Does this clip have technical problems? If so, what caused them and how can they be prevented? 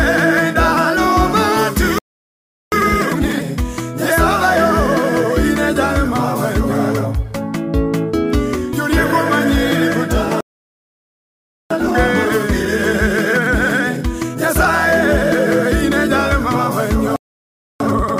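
Yes. There are three playback stalls, at 1.99 to 2.72 s (0.74 s), 10.41 to 11.70 s (1.3 s) and 17.16 to 17.80 s (0.64 s). Each time the sound cuts off mid-flow, most likely because the player ran dry or its thread was blocked. On a waveform each stall is a flat line, and on a spectrogram it is a blank vertical band. A larger playback buffer and a player thread that nothing else can block would prevent this.

Time-compressed catch-up follows each stall: 2.72 to 3.44 s at 2x, 11.70 to 14.70 s at 1.15x, and 17.80 s to the end at 2x. The player trims its backlog by cross-fading out small slices, so the sound rushes at normal pitch. On a spectrogram the features are squeezed in time but not shifted in frequency. Avoiding the stalls, or resyncing without speeding up, would prevent it.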